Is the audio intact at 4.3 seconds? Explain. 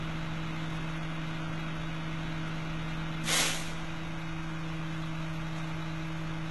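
No. At 4.3 seconds, as across the whole clip, the treble is synthetic, pointing to HE-AAC compression at heavy damage. Upper bands are likely rebuilt by copying lower ones upward, which fits roughly 16 kbps, so the highs sound gritty and metallic and stop at 11.8 kHz.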